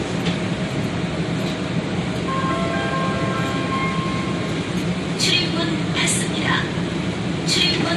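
Transcoding between lossy codecs runs throughout: nothing above 13.1 kHz, with swirly smearing and grainy MP3-style artefacts heard together, likely HE-AAC re-encoded as low-rate MP3.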